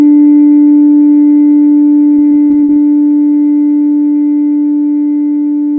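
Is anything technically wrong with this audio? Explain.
Yes. From 2.16 to 2.70 s there is repeated packet loss, giving a robotic sound. Six gaps, the longest 51 ms, are each patched by extending the preceding audio, so about a quarter of that stretch is synthetic fill. This makes the sound choppy, with pieces missing. The call path's bandwidth ends at 8 kHz, consistent with a G.722 codec at 64 kbps.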